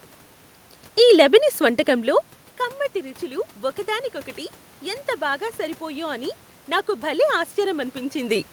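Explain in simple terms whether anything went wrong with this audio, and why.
Automatic gain rising, from about 5.18 s to the end of the clip: the level of the speech dropped sharply at the microphone, so the automatic volume control decided the input was too quiet and slowly turned itself up. You hear the voice and the room's background noise swell together over the last few seconds, instead of the volume staying steady. The room noise itself, and the talker's shifts in distance around 2 s and 8 s, are not faults.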